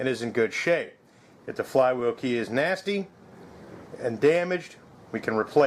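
Clock drift between sender and receiver runs through the whole clip: the sending clock runs roughly 4 percent slower than the receiving one. The jitter buffer keeps draining, so the receiver must keep padding the stream by repeating short pieces of audio to stay fed.

Repeated timing corrections from 0.18 s to 5.59 s: to make up for the slow sender, the receiver keeps inserting brief repeated fragments, all in the same direction and spaced unevenly. The sound plays at about 97 percent speed, adding roughly a fifth of a second in total.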